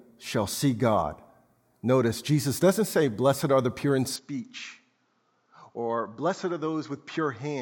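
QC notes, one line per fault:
4.16 s to end, input switched to a poorer device, likely: after "are the pure in" the sound abruptly dulls above 7.6 kHz, drops about 10 dB and gains faint new background noise with no gap, unlike a simple filter change.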